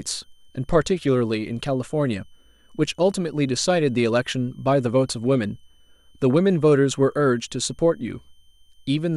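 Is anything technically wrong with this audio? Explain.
Yes. A switching supply whistle runs throughout this speech: a faint high tone near 3 kHz, wandering between about 2.98 and 3.21 kHz, roughly 45 dB below the speech. A power converter running in an audible burst mode, or beating with another supply, leaks into the signal. On a spectrogram it appears as a thin, slightly wavering horizontal line.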